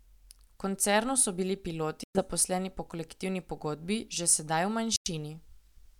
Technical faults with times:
2.03-2.22 Bluetooth dropout
4.96-5.09 Bluetooth dropout

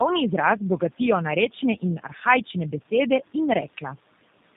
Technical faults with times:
0.00-4.56 tandem speech coding
2.80-2.91 speech cut by the noise suppressor

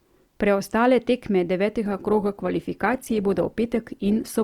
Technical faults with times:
1.85-4.43 adaptive stream at a lower bitrate

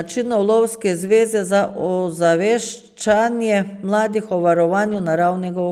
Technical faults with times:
1.07-1.09 lost packet rebuilt from error correction
4.85-4.99 lost packet rebuilt from error correction

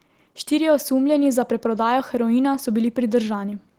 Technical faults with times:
none

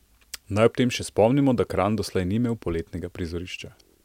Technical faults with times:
none

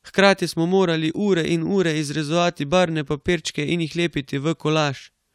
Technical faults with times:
none

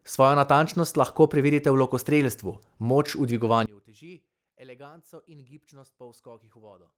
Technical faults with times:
3.66-6.98 one channel inverted

